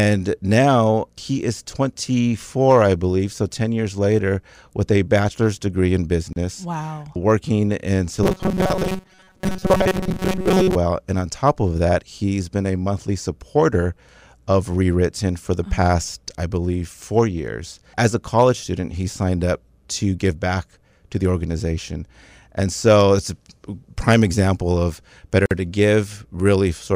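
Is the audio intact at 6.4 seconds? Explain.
No. Just before that point the speech breaks with a gap at a join of encoded pieces, from 6.33 to 6.36 s, a gap of about 32 ms. The audio was encoded in separate pieces and joined untrimmed, so one run's end padding and the next run's start delay both remain. Its edges are smeared by the codec, and the speech resumes exactly where it stopped. Nothing is lost, unlike a dropout, which cuts material away.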